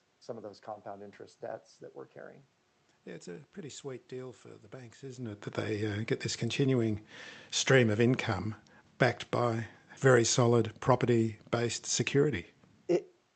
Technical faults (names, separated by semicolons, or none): none